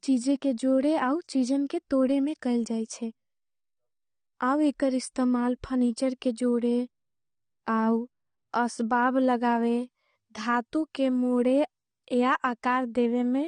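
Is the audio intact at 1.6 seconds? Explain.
No. At 1.6 s the speech carries AAC compression damage, present throughout the clip. The high end is cut and the sound is dull and smeared. Sibilants sound fizzy and vowels warble. This likely comes from AAC-LC coding, and fits a bitrate near 32 kbps.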